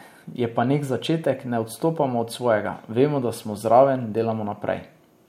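Listening to this speech recording, nothing stood out as a technical problem at any point.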